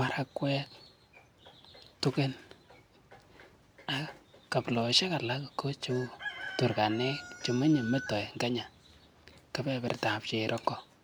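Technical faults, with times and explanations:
The speech signal holds steady from beginning to end, with no technical faults to report.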